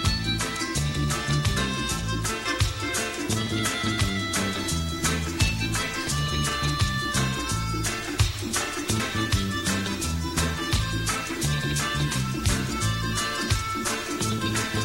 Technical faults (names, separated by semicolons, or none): damaged data in a compressed stream; stuck bit